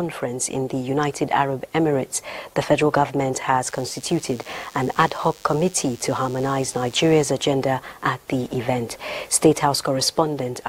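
From 3.67 s to 7.32 s a thin, steady buzz sits under the audio, recognisably DECT cordless phone buzz. A nearby DECT handset or base transmits a short radio burst every 10 ms. Some stage in the audio chain rectifies that energy, turning the 100 Hz burst rate into an audible tone rich in harmonics. The buzz stays roughly 25 dB below the wanted sound.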